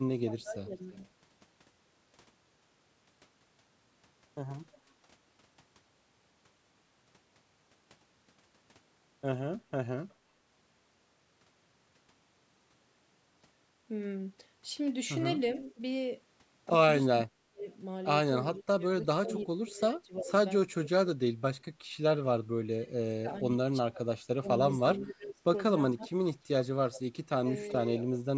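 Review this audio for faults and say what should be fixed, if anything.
Speech suppressed in double talk at 0.11–0.74 s and from 15.74 s to the end: the level dips by up to about 25–30 dB, likely because the echo canceller ducks both talkers at once. Unlike packet-loss gaps, these are gain dips rather than clean holes. A canceller with better double-talk detection, or a headset on the loudspeaker side, would prevent it.

Echo leak at 0.93, 4.72, 10.09, 15.58, 19.29 and 24.99–27.73 s: a delayed copy arrives about 350–380 ms late, likely residual loudspeaker echo the far-end canceller missed. It ranges from about −40 dB to about −15 dB. Unlike room reverb, it is a distinct later repeat, not a smooth tail. Tuning the far-end echo canceller or using headphones there would remove it.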